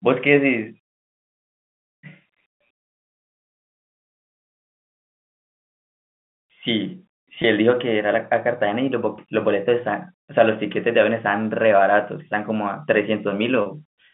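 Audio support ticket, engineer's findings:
Packet loss with pitch repetition at 7.42–7.44 s and 9.16–9.18 s. About 20 ms missing each time, consistent with a single dropped frame. Receiver concealment loops the last pitch period across the gap, giving a brief held, buzzy tone. At 13.62–13.66 s, 40 ms missing, fitting two consecutive frames. Repeated cycle runs longer and starts to fade, a slightly longer smear before the speech resumes. Telephone-band G.711 path, roughly 150 Hz to 3.5 kHz, carries the audio throughout.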